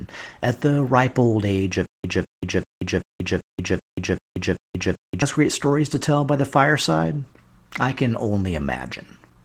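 Throughout the speech, Opus voice compression codes the excitation coarsely, with the sound pointing to roughly 16 kbps in the hybrid mode that pairs SILK with a CELT layer for the upper band. The speech comes out plainly hoarse, muffled and slightly robotic.

From 1.86 to 5.22 s, the stream likely stalled and replayed its last fragment at each retry, producing a stutter with silent gaps: a 205 ms burst repeats eight times, each followed by 182 ms of digital silence, every 387 ms, and the audio meant for that span is lost.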